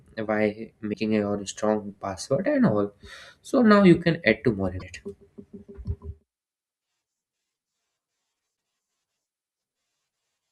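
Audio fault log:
0.90–0.95 s (just before "a your strong password"), 4.77–4.83 s (after "can add two more") and 8.53–8.56 s: damaged data in a compressed stream. Corrupted frames throw the decoder out of sync, producing a brief chirp, squawk, click or short hole while it searches for the next frame header.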